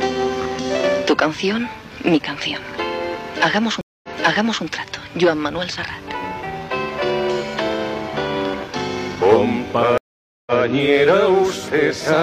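Twice the connection drops and the player reconnects, spinning up a fresh decoder mid-stream. This is a stream reconnect. From 3.81 to 4.64 s the sound cuts out for 0.22 s, then picks up again 0.60 s earlier, as the server resends a burst, so a stretch repeats. From 9.98 to 10.60 s the gap lasts 0.49 s and the resumption lands 0.14 s back. Each restart fades in over its first frame.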